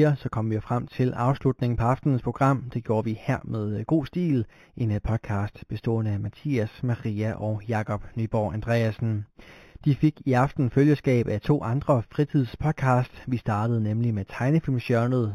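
Throughout the speech there is imaging from linear upsampling. The band stops near 4 kHz, which points to an 8 kHz source raised to 44.1 kHz by straight-line interpolation between samples. That crude filter dulls the top of the original band and lets a mirrored copy of the spectrum through, the first image sitting between 4 and 8 kHz at roughly 35 dB below the speech. It is heard as a faint metallic shimmer riding on sibilants.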